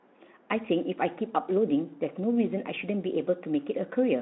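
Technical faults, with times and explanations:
No technical faults are present.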